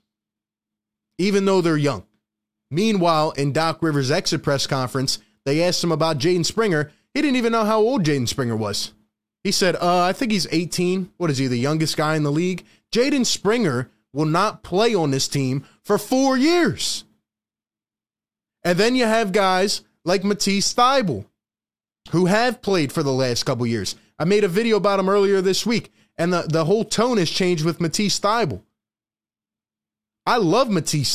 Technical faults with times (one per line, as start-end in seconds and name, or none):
none